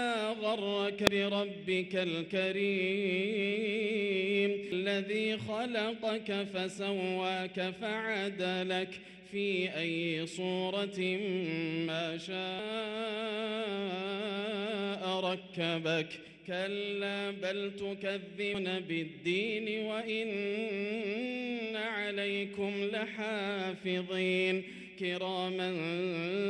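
Damaged data in a compressed stream at 1.07, 4.72 and 12.59 s, then 16.24–16.28 and 18.51–18.55 s: corrupted frames desync the decoder, producing brief blips.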